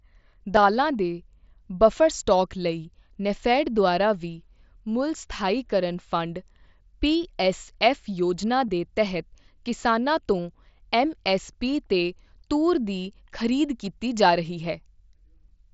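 At 0.56, 8.68 and 10.38 s there's concealed Bluetooth headset packet loss. Each time about 7.5 ms of speech dropped between headset and phone, and the receiver patched the hole by repeating the best-matching bit of the last 20 milliseconds or so, so these are close to invisible. The one at 13.85 s covers about 15 ms, long enough that you can catch a short buzzy tone and a slight warble as real audio resumes over the wideband mSBC link.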